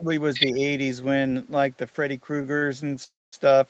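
A speech recording carried over a call path with Opus band-limited to 8 kHz. From 0.00 to 0.08 s and again from 0.52 to 0.60 s the speech dips by roughly 10 dB and then about 5 dB, likely speech suppressed in double talk as the echo canceller turned both sides down. Between 0.34 and 0.46 s a second voice comes through at about the same level as the talker, likely the other side's voice leaking through from the loudspeaker past the echo canceller. At 2.41 to 2.46 s and 2.58 to 2.64 s the sound hangs for 22 ms and then 41 ms, a short stall from a late packet each time, with the jitter buffer stretching the last sound until the audio resumes intact. From 3.04 to 3.34 s the audio halts for 300 ms, a call audio freeze likely caused by delayed packets, with a fading fill followed by roughly 190 ms of silence before speech picks up where it stopped.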